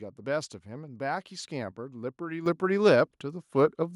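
At 2.46 s the voice and background jump up together by about 8 dB: a microphone volume step-up, the call software raising the input gain in one move.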